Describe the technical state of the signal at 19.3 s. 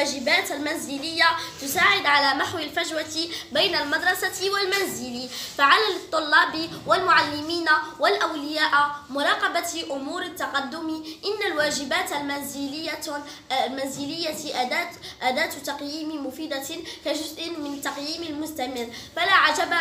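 At 19.3 s the signal is intact, with no dropout, clipping, distortion or other fault audible at that point.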